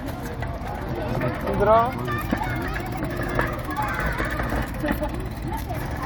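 No technical fault can be heard anywhere in this recording of sounds.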